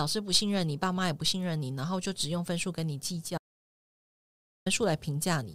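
At 3.38 s the speech stops dead, and sound resumes at 4.66 s. This is an audio dropout to silence. The gap is silent, with no room tone. Input was likely lost while silence was written. About 1.28 s of speech is gone.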